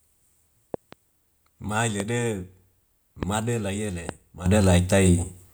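A speech recording with loud pops standing about 15 dB above the voice: a double pop from 0.74 to 0.95 s, then single ones at 2.00 to 2.02 s, 3.23 to 3.25 s just before "la yele", and 4.09 to 4.11 s just after "la yele". These are likely voltage spikes from a plug, switch or static discharge. From 4.46 s to the end, a sudden gain jump makes voice and background noise leap about 10 dB louder together, likely a digital gain setting applied instantly without a ramp.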